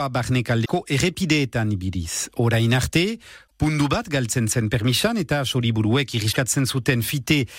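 Damaged data in a compressed stream breaks into the speech at 0.62–0.70, 3.44–3.51 (just before "pundu bat galtzen zen") and 6.28–6.37 s, as bad frames knock the decoder out of sync.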